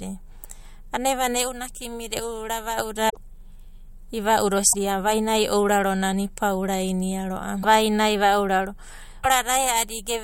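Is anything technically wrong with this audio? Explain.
Yes. Damaged data in a compressed stream appears at 3.06–3.17 s, 4.72–4.75 s, 7.62–7.65 s and 9.23–9.26 s. Corrupted frames make the decoder misread and resynchronise, producing brief chirps or blips in the speech.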